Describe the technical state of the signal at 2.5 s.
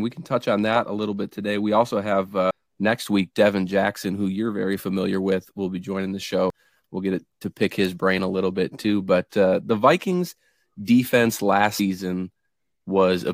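A dropped buffer (overrun) at 2.51 s: the speech jumps forward, about a third of a second of it missing and the two sides joined with no gap. The likely cause is samples not being read before the hardware overwrote them.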